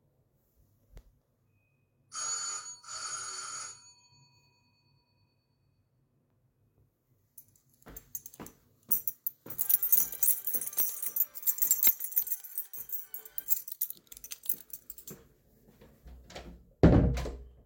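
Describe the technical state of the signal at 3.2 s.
At 3.2 s the signal is intact, with no dropout, distortion, glitch or other fault audible at that moment.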